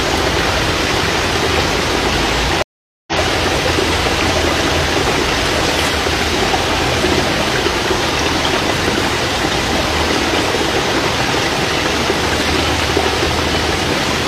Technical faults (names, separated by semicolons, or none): stream reconnect